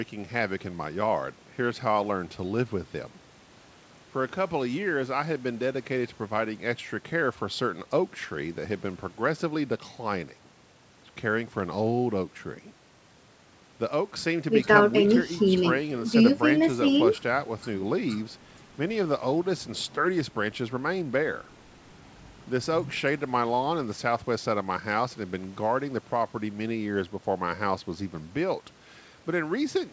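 No technical faults can be heard in the speech, whose content stops at 8 kHz, as expected from the call's microphone processing and a wideband call codec, which points to something like G.722 at 64 kbps.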